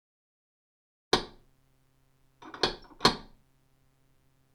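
Sounds, with no technical faults to be heard.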